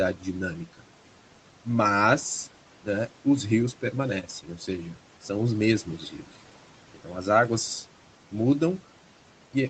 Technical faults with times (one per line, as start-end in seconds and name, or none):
0.00-9.70 noise suppressor artifacts
0.66-0.84 speech cut by the noise suppressor
4.23-4.68 speech cut by the noise suppressor